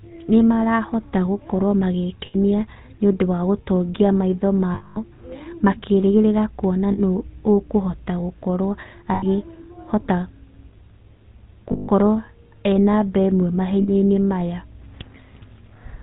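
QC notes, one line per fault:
Throughout: GSM full-rate codec. The speech has a plainly audible buzzy, gravelly roughness. Nothing above 4 kHz survives. The vocal tract is modelled and driven by sparse, regularly spaced pulses, which fits a 13 kbps full-rate coder.
2.26 s, 4.74 s, 6.92 s, 9.14 s, 11.72 s, 13.82 s: lost GSM frames. Gaps last 80, 220, 60, 80, 160 and 60 ms. The first follows "nĩ marahota gũkorwo", the third "makĩrĩgĩrĩra kuona", the fourth "ũkũhota gũkorwo". Each holds the last good sound as a rough metallic ring.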